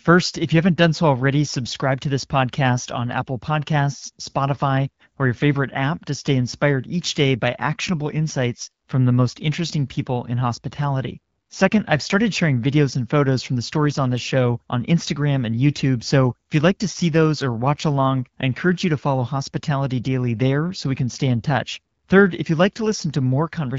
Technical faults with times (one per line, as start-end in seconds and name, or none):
none